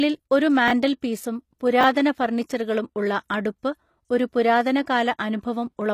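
Across the whole clip the speech has gritty, lispy s sounds and a treble that is bright but not quite real, with nothing above 14.9 kHz. This is likely HE-AAC compression at a low bitrate, around 24 kbps: spectral band replication rebuilds the top from copied lower bands. Unlike plain lowpass dulling, the treble is present but synthetic.

At 0.68 to 0.71 s and again at 1.81 to 1.84 s, chunks out of order produce a brief jumbled moment. A 10 ms chunk plays about 20 ms late, after the audio that should follow it, leaving hard joins. Unlike a dropout, no sound is missing; it is only rearranged.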